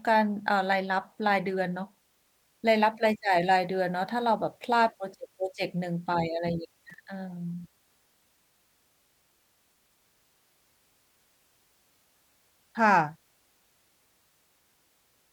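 At 6.90 s the speech is broken by loose connector crackle. It lasts until 6.94 s, only about 44 ms. A worn or dirty contact in the signal path is briefly losing and regaining connection. Each break chops the audio off and lets it back in. Any DC sitting on the line jumps at those moments and adds pops. The result is a short, ragged burst of scratchy crackle laid over the speech.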